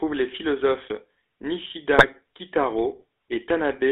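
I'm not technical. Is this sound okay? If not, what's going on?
No. The whole clip carries the sound of the GSM full-rate codec, the original digital mobile-phone system. It squeezes the voice by rebuilding it from a simple model driven by regular pulses, and this clip is also limited to roughly 300 Hz to 3.6 kHz. The result is a buzzy, gravelly roughness on every syllable. Unlike plain muffling from a narrow phone line, the grit sits inside the voice itself rather than just dulling the top end.

Between about 1.98 and 2.05 s there is a brief burst of GSM bit errors. On a weak link, some of the transmitted data got corrupted, and the decoder rebuilt a couple of short chunks from wrong information. That produces a sudden squawk or gargling blip, over in a fraction of a second. A dropout would go quiet or repeat sound. Here the voice briefly turns into a strange, distorted noise instead.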